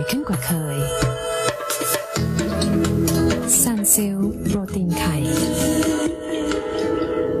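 From 1.11 to 3.66 s the receiver loses its digital stream and blends to the FM broadcast of the same station, crossfading over 347 ms and back. Hiss rises to roughly 30 dB below the signal, and the level shifts by about 2 dB.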